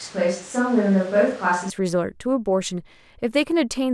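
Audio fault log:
0.0–1.70 s, switch to a distant microphone: the speech is already roomy and hollow when the clip starts, thin in the low end, with background noise sitting about 25 dB under the speech. Oddly, the level barely changes. At 1.70 s it snaps back to a close, full sound. The likely cause is that the close mic's feed dropped out and a farther mic, such as a camera's, filled in until it returned.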